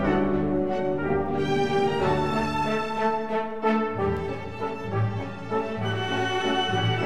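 The audio carries CD scratch ticks: three regular ticks between 3.90 and 4.43 s, none longer than about a millisecond, where a scratch defeats error correction each revolution and the player interpolates or mutes.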